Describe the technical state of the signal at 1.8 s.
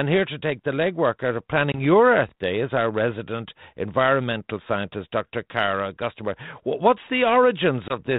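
At 1.8 s there is packet loss on an ADPCM call, spanning 1.72 to 1.81 s. About one packet, 20 ms of audio, became silence, leaving a flat, hard-edged gap in the waveform and a blank vertical stripe on a spectrogram. The decoder's predictor and step size then lag the sender's, so speech resumes slightly distorted before settling within tens of milliseconds.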